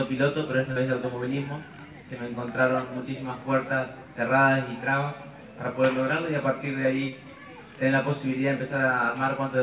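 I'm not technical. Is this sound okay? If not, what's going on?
No, there are two kinds of problem here.

The first is short concealed packet loss, at 0.72 s and again at 7.08 s. Each time, about 40 milliseconds of audio got lost on its way across the connection. The receiving end patched each gap by briefly carrying on the sound that came just before it, then slid back into the real audio. You hear a tiny smear or wobble at those two moments, and anything very short that fell in the gap is simply gone.

The second is a loudspeaker feedback squeal, from 2.35 s to 4.66 s. A microphone picked up the speaker it was feeding, and the sound went round and round that loop, getting louder each time at one particular pitch, here about 5.9 kHz, a high, piercing tone. It swells up over roughly a second and a half until it sits well above everything else, then stops at about 4.66 s.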